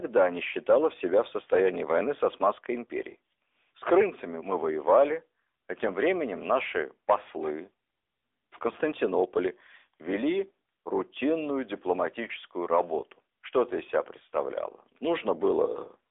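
Throughout, the speech went through the AMR narrowband mobile codec at a rate that suggests about 10.2 kbps. Nothing above 3.8 kHz survives, leaving thin, plainly buzzy speech.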